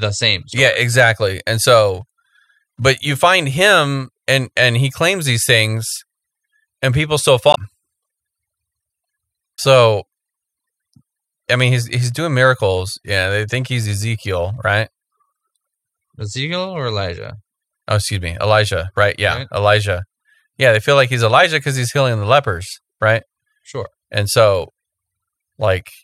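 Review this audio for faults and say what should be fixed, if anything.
Two short bursts of damaged data in a compressed stream, from 7.51 to 7.57 s and from 9.52 to 9.59 s, each about 60 to 70 ms, are heard as brief blips breaking into the speech. At those points the decoder met corrupted frames, misread or rejected them, lost sync, and had to hunt for the next valid frame header before normal playback resumed. Re-obtain or re-transfer the source over an error-checked path, and verify file integrity before decoding.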